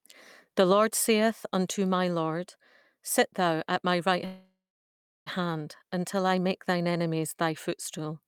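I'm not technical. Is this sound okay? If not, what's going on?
No. A call audio freeze from 4.25 to 5.28 s: the sound stalls for about a second, fading to silence, then resumes where it stopped, likely from delayed network packets.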